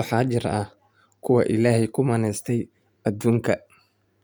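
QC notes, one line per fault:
Nothing stood out on listening to this speech recording.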